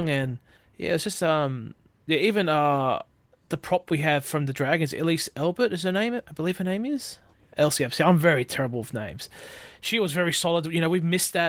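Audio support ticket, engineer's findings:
No faults found in this speech.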